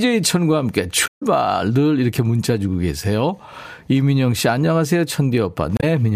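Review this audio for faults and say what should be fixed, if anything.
Brief glitches break into the speech at 1.03 to 1.23 s, adding about 46 ms, and at 5.76 to 5.84 s. These come from damaged data in a compressed stream, where the decoder loses frame sync and resynchronises. Protect delivery with checksummed, error-corrected transport and verify file integrity before decoding.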